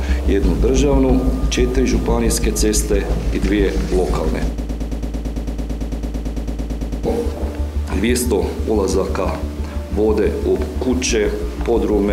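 At 4.58 s the sound locks into a broken-record loop. A fragment about 111.5 ms long repeats exactly, back to back, 22 times. The result is a rapid mechanical stutter with no forward motion. It lasts until 7.06 s, about 2.5 s in all. The likely cause is a stall in the player, encoder or stream, which kept resending the last piece it held. The audio that belonged in that gap is gone.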